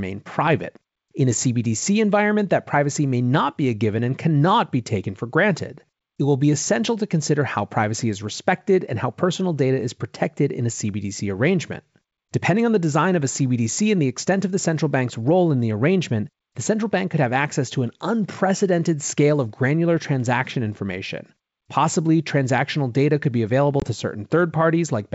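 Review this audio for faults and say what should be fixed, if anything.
Packet loss on an ADPCM call at 23.80 to 23.86 s, after "data could be available": a hard-edged 20 ms silent hole, likely one lost packet, appears as a flat gap in the waveform and a blank vertical stripe on the spectrogram. After it, the decoder's predictor and step size lag the sender's, so the sound returns slightly distorted until it resyncs. Packet loss concealment with predictor-state resynchronisation, plus jitter buffering or redundancy on the G.722 stream, would prevent it.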